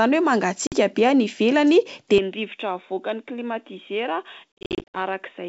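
At 0.67 s a 50 ms gap from packet loss on an ADPCM call cuts the speech to hard-edged silence, visible as a clean blank column in the spectrogram. On "be any ivelany", just after the gap, the speech returns slightly distorted while the decoder's predictor and step size resynchronise with the sender.

From 2.18 s the sound turns dull and boxy with no gap at the transition, likely because the input switched to a poorer device. The G.722 wideband band above 3.8 kHz vanishes on the spectrogram, the waveform drops about 5 dB, and a faint new noise floor appears about 50 dB down.

Between 4.58 and 4.97 s further ADPCM packet loss removes 300 ms in scattered holes, the longest 60 ms. The waveform shows a stutter of flat gaps.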